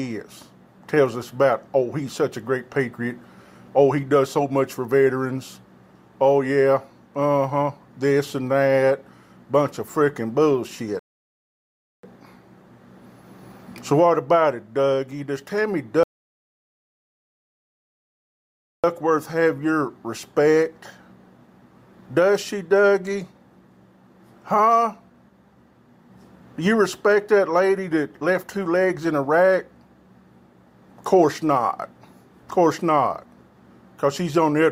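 At 10.99 s the audio halts in a rebuffering stall for about 1.04 s, and again at 16.03 s for about 2.80 s. The player's buffer ran empty, so playback waited before resuming exactly where it stopped. The waveform shows flat gaps, and the spectrogram shows blank columns.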